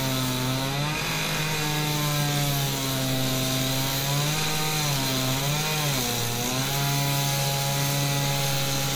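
Throughout the clip, two layers of compression artefacts sound together. This is likely transcoding between lossy codecs, which fits WMA near 64 kbit/s then MP3 near 96 kbit/s. The MP3 stage re-encodes earlier smearing and adds its own. Nothing remains above 20.1 kHz.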